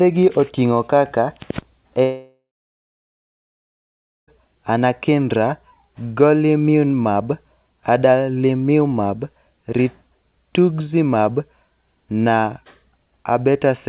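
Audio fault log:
2.03 to 4.30 s, long network dropout: about 2.25 s of speech is gone. The last sound before the gap stretches into a brief buzzy tail that fades within a few tenths of a second, leaving about 1.8 s of near-silence before speech resumes mid-stream with the missing stretch simply skipped. The likely cause is a run of lost packets, with the receiver's concealment briefly extending old audio before giving up. The band stays capped at 4 kHz, consistent with a narrowband call codec.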